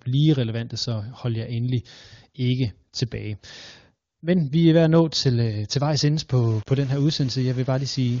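In this speech clip, from 6.33 s to the end the sound turns grainy and gritty, with a rough distortion that tracks the speech and with quiet tails sputtering, most likely low bit depth without dither: rounding to around 6 bits leaves error only about 25 dB below the signal.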